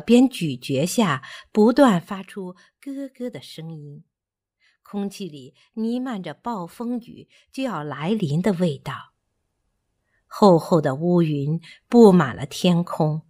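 Between 7.76 and 8.20 s, a level change of around 15 dB is applied in unsmoothed 1 dB jumps, about forty per second. The result is zipper noise: each step leaves a tiny click, so the speech carries a rapid ticking buzz while the level moves.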